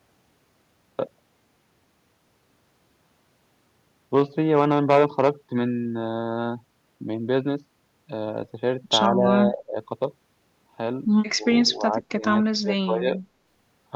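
An echo canceller likely mistook double talk for its own echo and turned the talker down. This is speech suppressed in double talk at 9.09–9.25, 9.47–9.77, 11.32–12.24 and 12.60–13.19 s, where the speech dips by about 10 dB at first, then deepens to about 25 dB.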